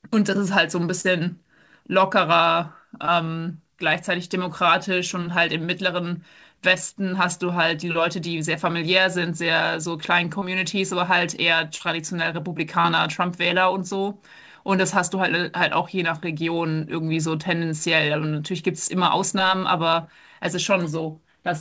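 Short concealed packet loss hits at 1.01, 3.05, 10.39 and 11.76 s: about 30 ms of speech each time never arrived, so the receiver stretched what came before into a quick smear or wobble.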